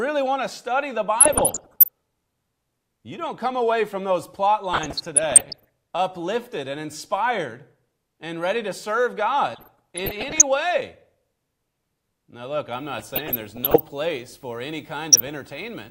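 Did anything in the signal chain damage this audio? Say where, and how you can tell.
Yes. DAB burbling enters at the digital radio reception and decoding stage, at 1.20–1.88 s, 4.73–5.68 s, 9.49–10.43 s, 12.99–13.80 s and 15.12–15.32 s. Bit errors of somewhere around half a percent to one percent slip past error correction into the MP2 data. Corrupted sub-band samples and scale factors then put short blips of noise and level jumps into single sub-bands.

Video or display buzz comes from analogue wiring picking up a screen or video cable, starting at 12.73 s and lasting to the end. It has a 50 Hz field-rate buzz with hash above it, roughly 35 dB below the programme. A thin 15.6 kHz line-rate whistle separates it from plain mains hum.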